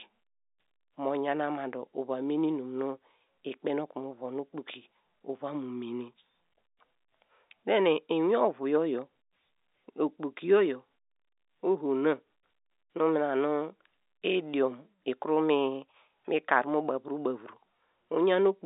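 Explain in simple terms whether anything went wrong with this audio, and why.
Nothing went wrong with this recording. It carries the narrow sound of ordinary G.711 telephone coding, where only the middle range of frequencies gets through, roughly from 250 Hz up to 3.7 kHz, which is how a normal phone line works.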